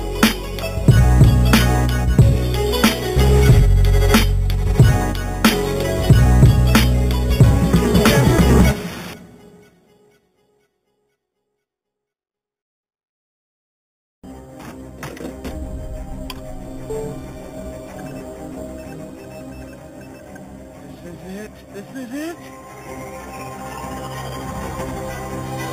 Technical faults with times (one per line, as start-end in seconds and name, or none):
0.00-25.73 imaging from sample-and-hold upsampling